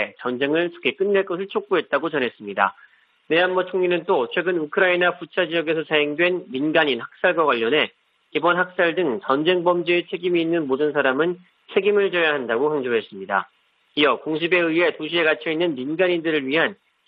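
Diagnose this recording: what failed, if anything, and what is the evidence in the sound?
Nothing failed in this recording, and no stage of the chain leaves any trace of trouble. Wiring, conversion, buffering, processing, transmission, storage and playback all pass the sound along without any sign of trouble.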